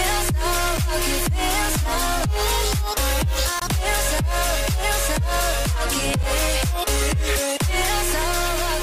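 Three brief dropouts break the audio: ticks at 0.77 s and 6.23 s, each a 5.8 ms hole, and a much longer 21 ms gap from 3.60 to 3.62 s. These are blocks of digital silence: samples zeroed, likely when the output buffer wasn't filled in time, fitting a 256-sample buffer.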